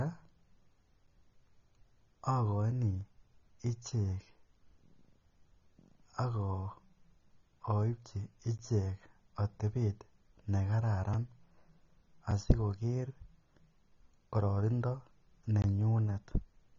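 From the first moment to the end, the speech is dull and plainly smeared, with a fizzy, warbling edge on sibilants. On a spectrogram the energy stops flat at about 6.9 kHz. The likely cause is AAC compression, the AAC-LC kind at a low bitrate that fits around 24 kbps. The encoder quantises each frame coarsely and drops the top band entirely.

A block of digital silence falls at 1.07 s, lasting 10 ms. The signal drops straight to zero and returns with no fade, so the ear hears a single tick rather than a gap. On a waveform it is a short flat line at zero with vertical steps at each edge. On a spectrogram it is a thin blank column.

The same fault recurs at 8.58 s (15 ms), 11.14 s (5 ms) and 12.31 s (5 ms), each a clean flat notch in the waveform. The two 5 ms blocks register as brief ticks, and the 15 ms one as a small pop. The longest block runs from 15.62 to 15.64 s, 20 ms of zeros. It is long enough to be heard as a tiny hole in the sound.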